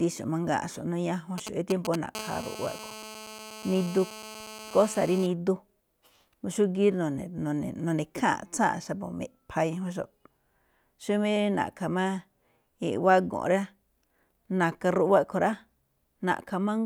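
At 1.38 to 1.96 s there are GSM signalling bursts: a nearby 2G phone's radio pulses get rectified into galloping ticks and short 217 Hz buzzes, almost as loud as the speech. Then from 2.15 to 5.27 s a steady GSM phone buzz sets in, the phone now mid-call and pulsing 217 times a second, giving a raspy, harmonic-rich drone about 15 dB under the speech.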